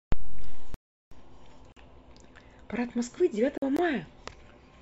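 At 0.74 to 1.12 s, 1.72 to 1.77 s and 3.58 to 3.62 s, the speech drops into blocks of digital silence with hard edges. Output samples likely weren't delivered in time. The first 372 ms hole fits a 16384-sample buffer. At 3.77 to 3.79 s, a 21 ms gap between stream segments inserts silence where 4 s segments' timestamps fail to meet, but no speech is missing.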